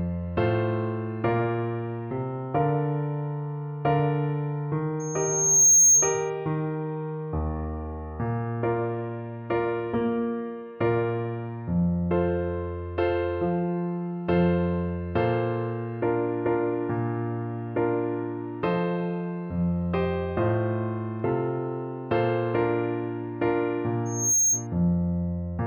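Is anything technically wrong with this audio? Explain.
Yes. Loudspeaker feedback squeal occurs at 5.00–6.30 s and 24.05–24.67 s: a microphone–loudspeaker loop exceeds unity gain at 6.4 kHz, so a tone swells within a second to roughly 10 dB, then 5 dB, above the sound.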